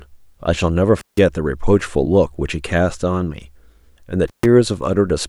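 At 0.99 s and again at 4.28 s the speech drops out through an intermittent contact, a loose cable or plug briefly opening the line. The gaps last 160 ms and 136 ms, with crackle as contact breaks and returns and faint hiss in between.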